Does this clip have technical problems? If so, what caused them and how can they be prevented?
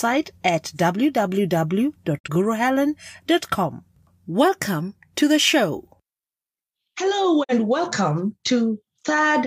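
Yes, two digital broadcast dropouts. The speech mutes with a quick fade at 2.18 to 2.28 s and 7.43 to 7.54 s, consistent with the receiver muting one lost frame of about 43 ms. Better reception or stronger error protection would prevent it.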